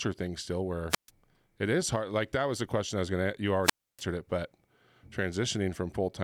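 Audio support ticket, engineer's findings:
Wireless microphone squelch dropout, 0.89–1.10 s and 3.63–4.02 s. Speech clip. Brief hiss rise, then near-silent holes of about 135 ms and 290 ms. FM link fading; receiver squelch muting output until carrier recovers. Check antenna placement and range.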